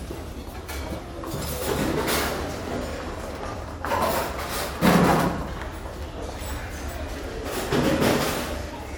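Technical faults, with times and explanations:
No technical faults can be heard in this audio.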